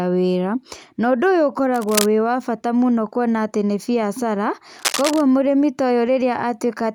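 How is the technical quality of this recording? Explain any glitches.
The speech is marred by two bursts of cable scratch noise, from 1.74 to 2.08 s and from 4.79 to 5.21 s. Each sounds like harsh scratching or rustling laid over the speech, only a few decibels below it. The likely cause is a worn cable or connector being moved so that its contact resistance jumps erratically. On a waveform, each burst shows as dense, spiky clutter riding on the signal. A spectrogram shows ragged broadband smears with no harmonic structure.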